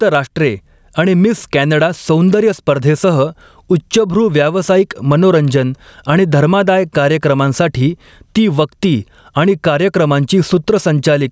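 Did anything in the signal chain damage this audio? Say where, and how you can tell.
Yes. Gain pumping runs through the whole clip. The gain is pulled down by around 10 dB under each loud sound, likely from excessive input gain hitting a fast limiter.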